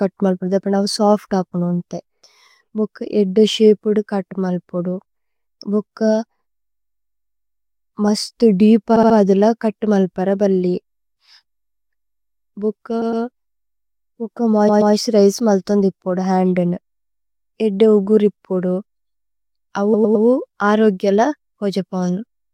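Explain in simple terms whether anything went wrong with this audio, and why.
The speech stutters four times: at 8.95–9.16 s, 13.01–13.23 s, 14.68–14.93 s and 19.93–20.25 s. Each stutter is a case of repeated frames. A short chunk of the compressed audio was stored or sent more than once, so the player goes back and plays the same piece again. The chunks run from 60 to 128 ms, and each one replays two or three extra times in a row. That adds between about 0.21 and 0.32 s to the clip at each spot.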